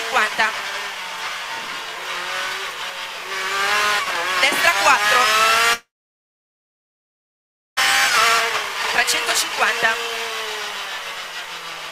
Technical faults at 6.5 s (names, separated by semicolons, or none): long network dropout